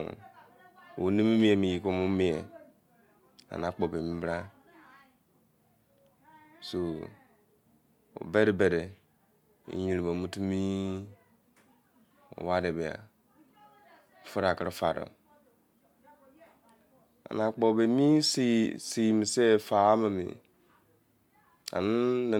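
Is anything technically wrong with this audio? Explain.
No, nothing technically wrong turns up anywhere in this speech recording.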